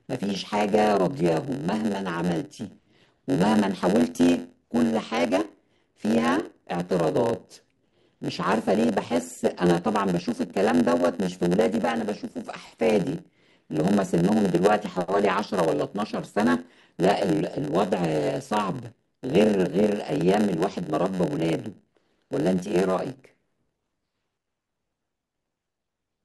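Throughout the speech, a block size mismatch (padded) leaves a zero-filled gap in every block, giving a 91.9 Hz buzz and playback at 0.919 speed with timbre unchanged, unlike resampling errors.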